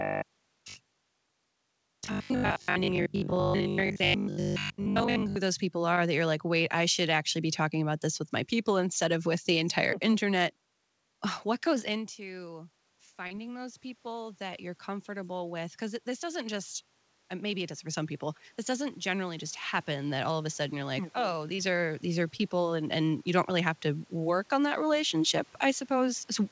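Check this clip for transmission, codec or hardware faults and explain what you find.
Three kinds of fault are audible in this speech clip, with the call codec's band limit leaving nothing above 8 kHz, which fits G.722 at 64 kbps.

Robotic sound from repeated short buffers, 0.02 to 5.36 s. The speech becomes a rigid, metallic 50 Hz buzz that still loosely tracks the words, and most of the real audio in that stretch seems to be replaced. The likely cause is that audio arrived too seldom, so the player kept looping the last fragment. A 50 Hz repeat rate fits a 20 ms buffer being replayed over and over, stamping that fixed pitch onto everything.

Short concealed packet loss at 5.94 to 5.97 s, 13.27 to 13.31 s, 21.55 to 21.59 s and 22.36 to 22.40 s. Each gap is about 20 to 30 ms of audio that never reached the decoder in time. The receiver bridged roughly 24 to 31 ms by extending the preceding sound and then blending back into the real signal. 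Each one is heard as a brief smear or wobble, and a quick consonant can drop out.

Automatic gain rising, 11.85 to 16.77 s and 18.67 to 24.41 s. In the first stretch the talker moves away around 12 s, and the input falls by about 16 dB. The gain control responds by lifting its gain by about 8 dB over several seconds, so the voice and the room noise swell up together. The second stretch brings a further gradual rise of about 5 dB, again raising the background along with the speech.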